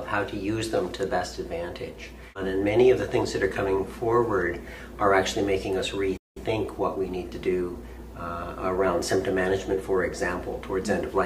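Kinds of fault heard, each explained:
Playback stall: at 6.17 s the sound cuts out mid-flow for 187 ms, likely because the player ran short of data or its thread was blocked.
Time-compressed catch-up: from 6.37 to 8.23 s the sound runs 1.1 times fast at normal pitch, as small spliced cuts shed the backlog.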